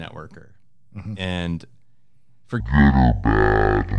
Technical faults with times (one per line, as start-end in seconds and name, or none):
2.60-3.99 wrong sample rate